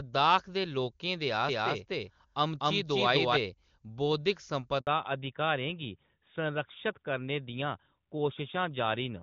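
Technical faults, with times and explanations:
1.49 to 3.37 s, doubled audio track: A second full-band copy of the speech runs about 300 ms behind the first, at roughly the same level. It has no decay or room colour and starts and stops abruptly. The likely cause is a second, slower capture path or an edit holding two offset copies.
4.81 to 4.87 s, handover gap: The speech cuts off within a few tens of milliseconds and stays silent for 60 ms. No speech frames arrived while the call switched networks, so this stretch of sound is simply lost.
4.87 s to the end, fallback to narrowband: Everything above 4 kHz disappears from here on, and the speech turns duller and rougher. Before this point the clean HD Voice sound fits AMR-WB at 23.85 kbit/s. The change fits a drop to AMR-NB at 12.2 kbit/s.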